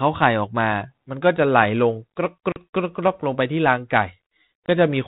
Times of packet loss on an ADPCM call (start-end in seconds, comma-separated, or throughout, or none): 2.52-2.58, 4.66